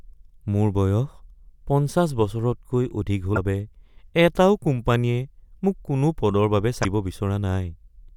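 A brief glitch cuts through the speech at 3.33 to 3.38 s, right after "বছৰতকৈ অধিক", and a second, similar blip follows at 6.81 to 6.85 s, each lasting about 50 ms. Both are damaged data in a compressed stream: bytes in the encoded file were corrupted, so the decoder misread those frames, lost its place in the stream, and produced garbled output until it found the next valid frame header.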